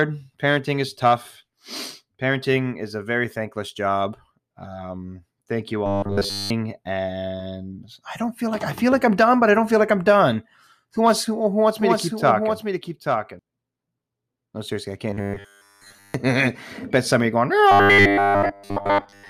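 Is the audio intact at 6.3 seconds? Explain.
No. Right after "thank you", from 5.86 to 6.50 s, there's robotic sound from repeated short buffers: a rigid, metallic 100 Hz buzz. It's likely that audio arrived too slowly and a roughly 10 ms chunk got looped over the whole span.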